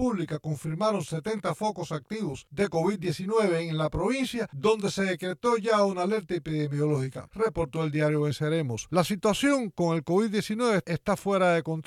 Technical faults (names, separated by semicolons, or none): channel delay (comb filtering)